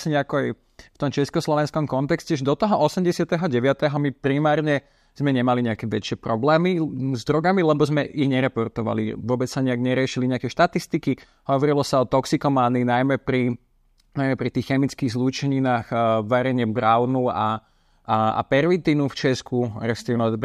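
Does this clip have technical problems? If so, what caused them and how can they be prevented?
No, this clip has no technical problems, so there is nothing to trace back to a cause or to prevent.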